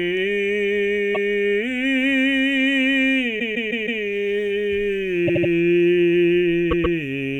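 Repeated frames make the music stutter: a 0.16 s block plays twice at 1.14 s, a 0.16 s block five times from 3.38 to 4.01 s, a 78 ms block four times from 5.27 to 5.50 s, and a 0.13 s block three times from 6.70 to 6.96 s. Each fits a run of frames decoded again. The waveform and spectrogram show identical patterns tiled side by side.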